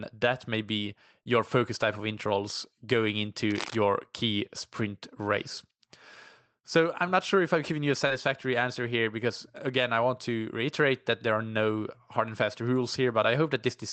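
It's a speech clip with two short concealed packet losses, at 1.23 to 1.27 s and 8.07 to 8.12 s, where about 20 ms of missing audio was patched by extending the previous sound, leaving a quick smear. Around 3.51 to 3.75 s there's a burst of cable scratch noise, uneven scratchy rustling not far below the speech, likely from a worn cable or connector being moved.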